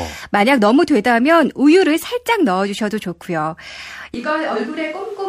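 At 2.79 to 2.83 s, an overlap between stream segments trims about 40 ms of real speech at a segment join, leaving a small skip where the waveform jumps. From 4.14 s to the end, the speech turns abruptly hollow and roomy, about 10 dB quieter, with room noise only about 25 dB below it. This is likely a switch to a distant microphone.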